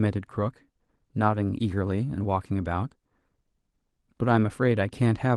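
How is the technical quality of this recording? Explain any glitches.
No glitches or dropouts can be heard in this speech.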